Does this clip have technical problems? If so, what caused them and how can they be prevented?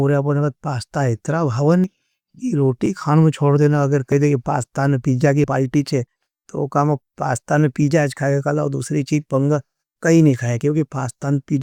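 Yes. The speech has four small jumps ahead at 1.84, 2.86, 4.12 and 5.44 s, the last just before "पालिटी छे तो वो". These are likely dropped buffers (overrun): roughly 20 to 70 ms went unread, was overwritten, and the two sides were joined. Larger buffers or a higher-priority capture thread prevent this.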